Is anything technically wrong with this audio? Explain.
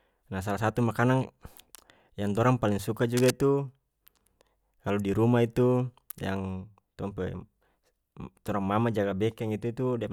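Yes. From 3.15 to 3.31 s there is a burst of cable scratch noise. A worn cable or connector being moved is the likely cause. Its contact resistance jumps about rapidly, adding dense, irregular crackle. It sits only slightly below the speech and is heard as a brief scratchy rustle.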